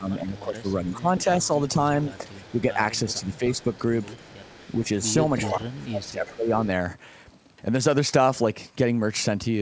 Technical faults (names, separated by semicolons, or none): speech suppressed in double talk; echo leak